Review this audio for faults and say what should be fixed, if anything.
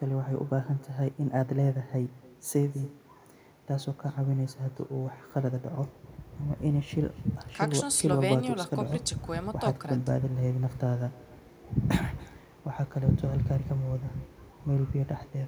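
Echo with no canceller runs through the whole speech clip. Each phrase returns roughly 300 ms later as a faint, thin copy, about 26 dB below the talker. The far end's loudspeaker feeds its microphone unchecked. Enable acoustic echo cancellation on the far-end device.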